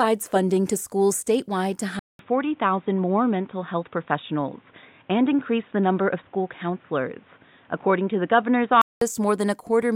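At 1.99 s the speech drops out for 200 ms, then returns dull and boxy, with nothing above 3.8 kHz. A new background noise sits well below the speech, while the overall level stays about the same. This narrowed sound lasts until 9.01 s, when the fuller sound comes back. The likely cause is the input switched to a poorer device, either another microphone or a headset's call profile, which passes a narrower band and brings its own noise.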